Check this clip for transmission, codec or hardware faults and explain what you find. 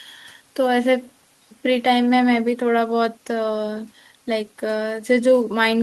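Nothing to report; a full listen through the speech turns up no audible fault.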